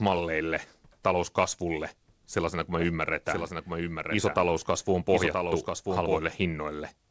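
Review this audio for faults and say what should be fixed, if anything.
After "talouskasvulle sellaisena kuin", from 2.79 to 6.19 s, a doubled audio track appears. A full-band copy trails about a second behind, roughly 5 dB quieter. It has no decay or room colour. It starts and stops abruptly. The likely cause is a second, slower capture path or an edit holding two misaligned copies. Prevent it by recording from one capture path only and checking edits for duplicate layers.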